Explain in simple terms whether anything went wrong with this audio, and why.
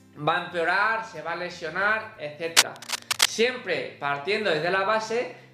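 From 2.56 to 3.30 s, a burst of cable scratch noise sits on top of the audio: dense, uneven scratching and rustling that is louder than the sound itself for about three quarters of a second. The likely cause is a worn cable, plug or control being moved while recording. A poor contact inside it keeps changing how well it conducts, and those rapid changes get added to the signal as crackly noise.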